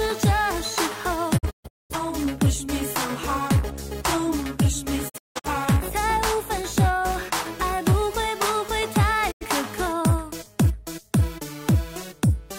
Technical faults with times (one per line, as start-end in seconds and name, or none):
1.37-1.95 digital broadcast dropout
5.08-5.49 digital broadcast dropout
9.30-9.46 digital broadcast dropout